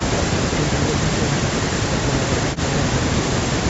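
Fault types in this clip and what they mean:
No faults: the speech carries nothing above 8 kHz, which fits the normal band limit of the call microphone processing and of a WebRTC call path with Opus coding, and neither adds any audible defect.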